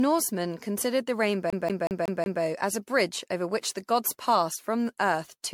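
Repeated lossy re-encoding has likely degraded the whole recording, a case of generation loss: the speech seems to have passed through an MP3 encoder around fifteen times, at a rate that points to about 96 kbit/s. Each pass requantises on a shifted frame grid, so noise and spectral gaps pile up. The result is swirly, hollow and smeared, with blurred consonant attacks and nothing above 19.1 kHz.

From 1.50 s to 2.42 s, the CD is stuck on one turn. A scratch throws the laser back a track at the same point on each revolution, so a 0.18 s slice of speech plays five times in a row. A brief mute falls at every jump, producing the quick, evenly spaced stutter of a skipping disc before playback moves on.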